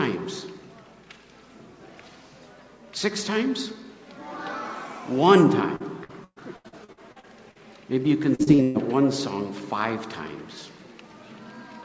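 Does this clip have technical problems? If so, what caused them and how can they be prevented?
Yes. Repeated packet loss (robotic sound) appears from 5.76 to 7.58 s, with about ten dropouts of up to 118 ms, and again from 8.35 to 8.78 s, where four dropouts of up to 122 ms conceal roughly half of that stretch. Each missing chunk was patched by extending the preceding sound, which gives a choppy sound with pieces missing.

On a spectrogram these patches show as smeared, repeated frame blocks below the 8 kHz ceiling, and the waveform shows abrupt joins between them. A steadier network connection and a larger jitter buffer would prevent it.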